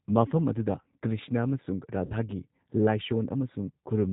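Throughout the clip, one channel arrives a few samples late, well under a tenth of a millisecond, and the two channels are summed to mono. This is channel delay causing comb filtering. Such a short offset puts the first cancellation notch high, around 7 kHz. Within the band that survives here, the effect is a gradual thinning toward the top of the range that gives the speech a slightly dull, phasey edge rather than obvious hollowness.

Also throughout, the speech has passed through the G.729 codec at 8 kbit/s. The encoder does not keep the waveform. It models each frame as a vocal tract filter plus a pitch predictor and a few pulses, and the decoder rebuilds the speech from that model. Nothing above 4 kHz passes, so the sound is narrowband. The coding damage is plainly audible as a rough, somewhat synthetic texture on the voice.

From 2.06 to 2.14 s, just after "ꯃꯐꯝ ꯑꯗꯨꯗ ꯀ꯭ꯔꯤꯁꯅ ꯑꯃꯁꯨꯡ", packets went missing. 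This is VoIP packet loss concealed by the speech codec. About 40 ms of data never arrived, which fits two lost 20 ms packets. The decoder filled the hole by extending its last pitch and filter settings at falling gain, so the sound smears into a brief buzzy, fading tone. The audio then takes a short while to regain its strength, because each new frame is decoded from the damaged state left by the concealment.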